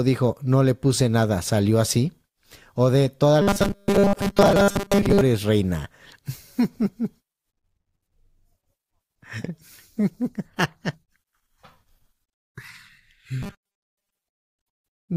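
Speech with robotic sound from repeated short buffers at 3.42–5.21 s and 13.42–14.23 s: a rigid 200 Hz buzz, which fits a 5 ms buffer, likely looped while most of the real audio is skipped. Unlike codec warble, that pitch stays fixed.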